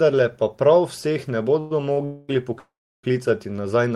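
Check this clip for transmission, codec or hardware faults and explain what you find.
The speech in this clip has two kinds of network fault, three call audio freezes and one short stall from a late packet, all between about 1.6 and 3.1 s.

Call audio freezes occur at 1.59–1.72 s, 2.05–2.30 s and 2.58–3.05 s, lasting 110, 238 and 449 ms. The likely cause is packets held up in transit until the jitter buffer emptied. The receiver extends the last sound as a fading buzz, and in the longest freeze it decays to silence for about 320 ms. Speech then resumes where it stopped, so nothing is lost, but each pause pushes the rest of the audio later.

A short stall from a late packet occurs at 1.92–1.99 s. One packet arrived after its playout time and the buffer ran dry briefly. The receiver stretches the current sound for about 42 ms until the packet lands, then continues from the same point. No audio is missing, but that sound is held too long, with a slight buzzy dip, and the stream is delayed by the same 42 ms.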